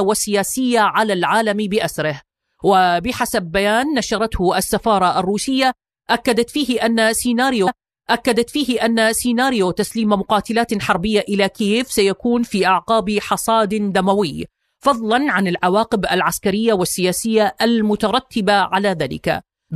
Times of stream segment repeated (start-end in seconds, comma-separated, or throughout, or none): 7.66-9.66